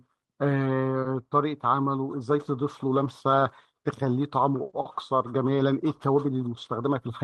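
From 4.65 to 4.87 s, and again from 5.55 to 5.61 s, the speech turns briefly rougher and grainier but never drops out. Each spot is a lost packet rebuilt from error correction: the Opus stream, running at 32 kbps with a 12 kHz bandwidth, lost packets, and the following packets carried low-bitrate copies that the decoder played instead. The first stretch points to about six lost packets, the second to two.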